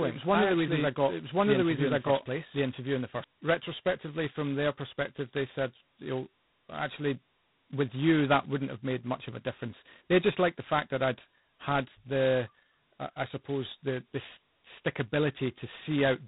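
From the start until 3.24 s, a doubled audio track is already running: an equally loud copy trails about a second behind, likely a second capture path, and cuts off abruptly between "i actually" and "retrospectively from their perspective". Throughout, G.726 ADPCM coding at 16 kbit/s leaves nothing above 3.9 kHz and adds heavy, rasping hiss that rises and falls with the speech level.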